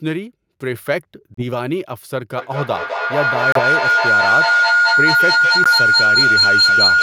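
At 1.34 s the speech briefly drops out to silence until 1.43 s, then picks up as if it had kept playing. It's likely a Bluetooth dropout, with late packets discarded; the lost stretch sounds like about 30 ms. Similar holes appear at 3.52 s and 5.64 s.

From 2.37 s to the end there's a feedback howl. Two devices on the same call are re-amplifying each other, so the loop builds a tone around 1.5 kHz, with the loop repeating roughly every fifth of a second and peaking about 7 dB above the speech.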